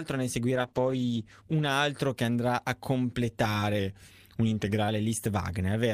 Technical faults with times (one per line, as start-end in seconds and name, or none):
0.57-1.79 call bitrate drop
3.79-4.88 drift correction step